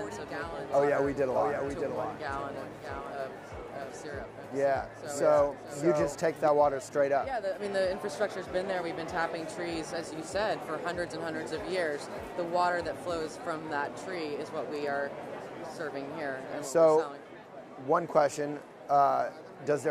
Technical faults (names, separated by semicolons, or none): doubled audio track